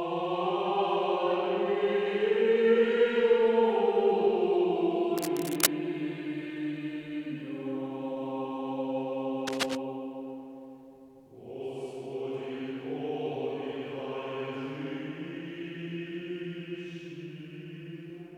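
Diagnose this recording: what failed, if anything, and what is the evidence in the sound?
Cable scratch noise at 5.16–5.68 s and 9.47–9.76 s: ragged rustling bursts near the sound's level, likely a worn connector in the analogue wiring changing contact resistance as it moved.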